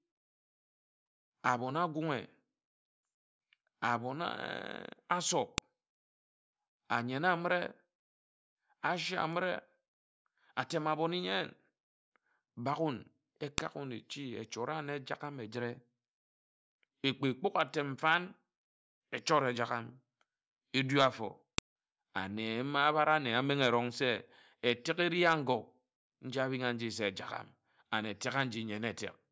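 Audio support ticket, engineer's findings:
Sharp click at 5.58, 13.58 and 21.58 s, every 8 s, each shorter than a few milliseconds. Probable stream or file joiner: file header played as audio, with WAV header bytes decoded as samples. Unlike dropouts or clipping, the snaps ignore the speech level and follow the 8 s chunk grid.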